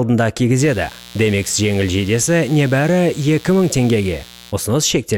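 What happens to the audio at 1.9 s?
At 1.9 s a mains buzz is running, present from 0.56 to 4.54 s: switching spikes at twice the 60 Hz mains rate add harmonics reaching several kHz, well below the main sound. Its raspy, bright edge separates it from a smooth, low mains hum.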